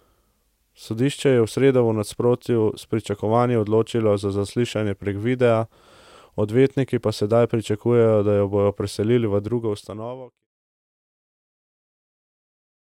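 Nothing stood out on listening to this speech, apart from the smooth fade out that begins around 9 s and is complete by 10.47 s, as an editor would apply it.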